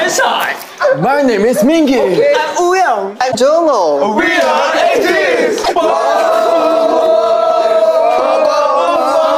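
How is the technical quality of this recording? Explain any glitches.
Two short glitches, at 3.31–3.35 s and 5.63–5.69 s, each a brief blip where the sound skips ahead. That's likely a broken MP3 bit reservoir: after a cut, frames borrow data from missing ~26 ms frames and decode garbage.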